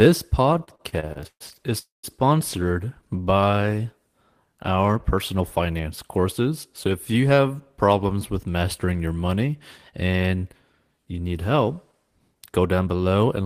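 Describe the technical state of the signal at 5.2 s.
At 5.2 s you're inside a jitter buffer speed-up that runs from about 5.04 to 6.25 s. The receiver's buffer had built up more audio than it wanted, so it trimmed out short chunks of a pitch period or so, over and over, to catch up, shaving about a tenth of a second in total. The speech plays at roughly 107% speed with the pitch unchanged, so it comes across as hurried.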